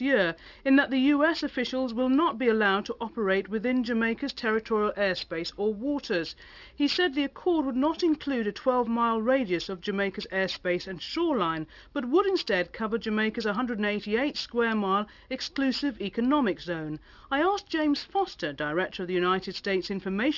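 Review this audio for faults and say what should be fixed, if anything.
Aliasing runs through the whole clip: the audio was resampled down without an anti-aliasing filter, and content above 6 kHz folds back into the band, consistent with a drop from 44.1 kHz to a 12 kHz rate. Sibilant and bright material turns gritty and metallic, with spurious tones roughly 20 dB below the signal and energy pressed hard against the 6 kHz edge. To prevent it, low-pass filter below half the target sample rate before any downsampling, or use a proper resampler that does this for you.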